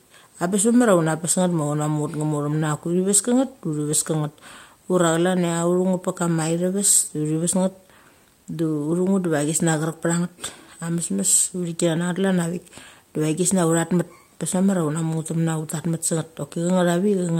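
Speech recording with no audible technical faults anywhere in the clip.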